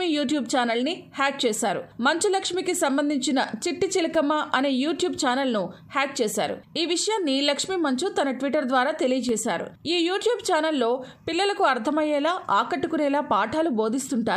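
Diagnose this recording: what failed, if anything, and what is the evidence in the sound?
Driver or buffer stage: two blocks of digital silence, at 4.15 s (about 2.2 ms) and 9.29 s (1.45 ms, fitting a 64-sample block), each heard as an abrupt tick, likely from late buffer fills.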